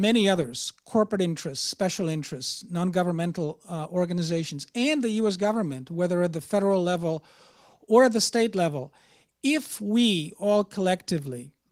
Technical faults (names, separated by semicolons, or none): none